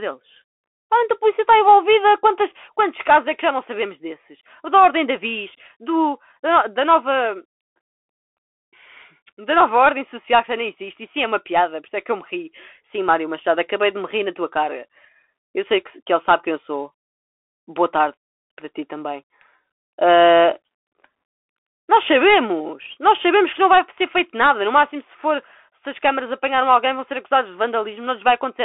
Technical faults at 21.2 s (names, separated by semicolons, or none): Bluetooth CVSD headset codec